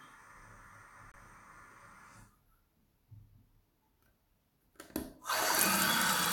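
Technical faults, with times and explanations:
1.12 to 1.16 s, corrupt frame muted: the sound drops abruptly into a 40 ms hole of silence, which fits two damaged frames of about 20 ms that the decoder rejected. The player filled the gap with nothing rather than guessing, and the timing after it stays put.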